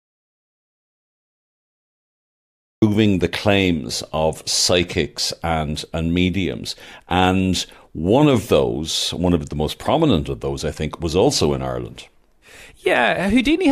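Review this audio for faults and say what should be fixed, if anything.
The speech opens in an audio dropout to silence that is already under way when the clip begins and lasts until 2.82 s, when the sound comes back in mid-flow. The gap is silent with no room tone, so the input was likely lost (a disconnected device, failed link or mute) while the recorder kept writing. On a waveform it is a dead-flat line; a spectrogram shows pure black before energy starts abruptly. Secure connections and monitor input levels before and during recording.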